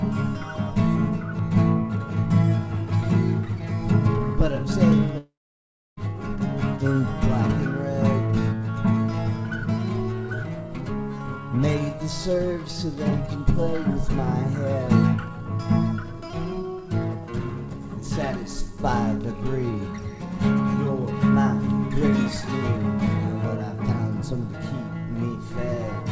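From 5.18 to 5.99 s the audio breaks off. The last sound stretches into a brief fading buzz, then roughly 0.66 s of near silence follows before the audio resumes with about 0.8 s missing, likely a long network dropout concealed by the receiver of a band-limited call path.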